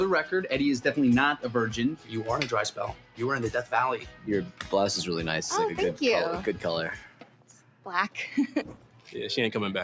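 Across the whole clip, a noise suppressor built for speech is acting on sound it was not designed for, treating sustained and ambient parts as noise and pulling them down by something like 10 dB. Level pumps as held material sinks while attacks pass. The call microphone processing also limits the band, with nothing above 8 kHz.

Distinct cuts where the noise suppressor clamps harder come at 1.96 to 2.14 s, 2.92 to 3.2 s, 3.98 to 4.28 s, 4.45 to 4.72 s, 6.96 to 7.87 s and 8.47 to 9.12 s. Each drops steady or decaying sound by about 10 to 11 dB, so tails thin out abruptly. The longest dip is the one near 7 s.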